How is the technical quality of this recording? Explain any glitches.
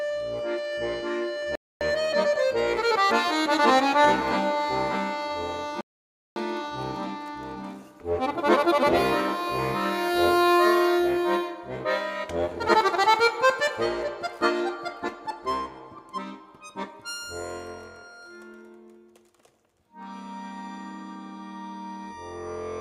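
The recording has two playback interruptions of the same type. A rebuffering stall occurs at 1.55 to 1.81 s and again at 5.81 to 6.36 s. Each time the player exhausted its downloaded audio and paused until more arrived, so the sound drops to silence for about 0.26 s and 0.55 s and then resumes exactly where it stopped. Nothing is skipped, but time is added.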